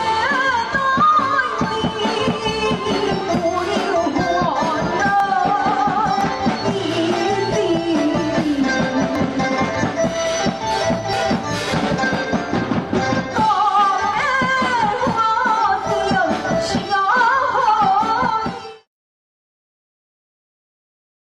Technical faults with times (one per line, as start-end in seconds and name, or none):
3.21-3.25 overlap between stream segments
5.20-5.23 overlap between stream segments
6.21 overlap between stream segments
9.15-9.18 overlap between stream segments
11.13-11.17 overlap between stream segments
12.14-12.18 overlap between stream segments
14.13 overlap between stream segments